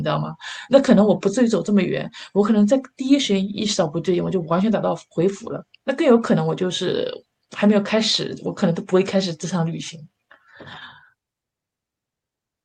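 No dropouts, clipping, glitches or other technical faults are audible anywhere in the recording.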